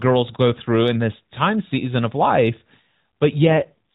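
From 3.46 s to the end, the speech turns rougher and more synthetic, with the same narrow telephone band and no gap. This is an AMR rate drop: the AMR-NB codec fell to a lower mode, which fits a step from 12.2 to 4.75 kbps.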